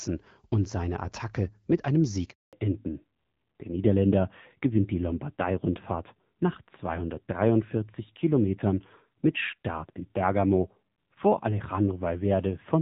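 A speech recording carried over a mobile call, where a handover gap strikes at 2.31 s, just after "mit einem". The phone switched networks and no speech frames arrived for 220 ms, so the sound dies away almost instantly and stays silent until 2.53 s, losing whatever was said in between. At that moment a fallback to narrowband follows. The call leaves HD Voice, whose light AMR-WB coding before the break fits about 12.65 kbit/s, for an older narrowband codec, consistent with AMR-NB at around 7.4 kbit/s. From 2.53 s to the end nothing above 4 kHz remains, and the speech turns duller and rougher.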